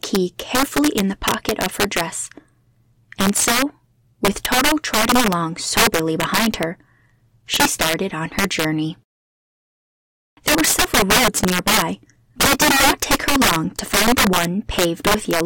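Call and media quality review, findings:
Integer overflow, throughout the speech. Violent cracks on loud syllables, far harsher than clipping. Gain stage driven about 16 dB past full scale, with no saturation. Around one sample in twenty exceeds the integer limit and wraps to the opposite sign. Each wrapped peak jumps across the full range. Probable component: fixed-point gain or mixer sum lacking a limiter.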